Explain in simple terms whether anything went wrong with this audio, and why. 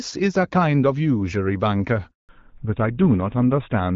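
Two things go wrong, both at the same moment. At 2.11 s the speech cuts out and stays silent for 180 ms, until 2.29 s. This is a handover gap. The phone switched the call from one network to another, and during that switch no audio arrived at all. The voice dies away quickly instead of stopping with a click, and whatever was said inside that short window is simply missing.

When the sound returns at 2.29 s, it has changed character for the rest of the clip. This is a fallback to narrowband. Before the gap, the call ran on HD Voice, which carries speech clearly with only light coding roughness. After the switch, the new link uses an older, narrower phone codec that keeps nothing above 4 kHz. The crisp upper detail, like the hiss of s sounds, is gone, so the voice turns duller and rougher through to the end.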